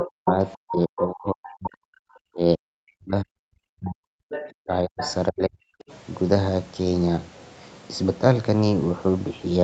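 A speech recording in which the echo canceller likely failed to fully subtract the loudspeaker signal, so the other side's voice leaks through at 0.0 to 0.32 s, about 5 dB below the talker, and more faintly, about 10 dB down, at 0.97 to 1.03 s, 4.3 to 4.5 s and 4.99 to 5.14 s. During double talk the same canceller, likely unable to tell the talker from the echo, suppressed speech at 0.03 to 1.79 s, 2.33 to 4.32 s and 4.63 to 5.63 s, with the voice dipping by as much as about 40 dB. The audio has nothing above 8 kHz, which fits the Opus call path.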